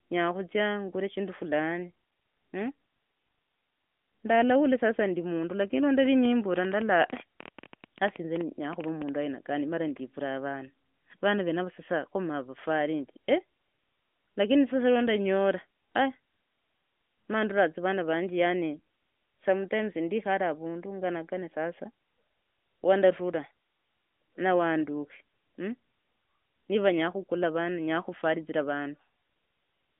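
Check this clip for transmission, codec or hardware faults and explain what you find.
There is one fault, a train of clicks, laid over the band-limited sound of the AMR-NB phone path. From 6.06 to 9.10 s, just after "sasa ndi mundu lakini", something, likely outside interference or a struggling interface, injects about thirty similar pulses at roughly 9.9 per second, irregularly spaced. Peaking about 10 dB above the speech, they form an uneven ticking that carries through the pauses too.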